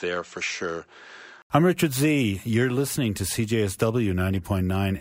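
Input switched to a poorer device, likely, from 0.0 to 1.5 s: the speech opens dull, with nothing above 7.9 kHz, a level roughly 5 dB lower and faint added noise well below it, then clears after an 80 ms silence at the switch.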